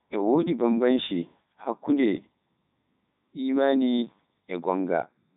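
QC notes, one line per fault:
Throughout, Codec 2 vocoder: the speech is robotic and buzzy because it's rebuilt from sine waves driven by pitch, voicing and a spectral envelope rather than the real waveform. The heavy damage fits its top 3.2 kbit/s mode, and nothing survives above 3.8 kHz.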